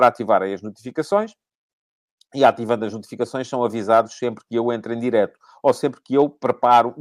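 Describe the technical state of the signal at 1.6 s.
At 1.6 s the speech signal is intact, with no audible technical fault at that moment.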